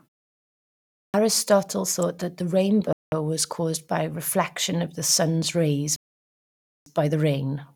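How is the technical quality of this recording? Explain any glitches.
The recording has three kinds of glitch in this speech: a clipped word onset, one electrical snap, and two playback dropouts.

At 1.06 s, after a pause of about 1 s, a clipped start after a pause swallows roughly 83 ms of the first sound. The output device went idle in the silence and was still waking when speech resumed. The word begins abruptly, and the waveform jumps straight out of the flat line with no rising edge.

At 2.02 s, just before "that the", an electrical switching spike adds a brief sharp snap on top of the speech. It is likely from a nearby switch or discharge arcing into the audio line. On a spectrogram it is a thin vertical stripe spanning all frequencies, and on the waveform a narrow spike.

Two Bluetooth stalls cut the audio to dead silence. The first runs from 2.93 to 3.12 s (193 ms), between "that the" and "was caused by reflection". 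The second runs from 5.96 to 6.86 s (900 ms), after "reflection of the sun’s". Interference likely delayed packets until the headphone buffer ran empty. Both show as hard-edged blank gaps on the spectrogram, including the background.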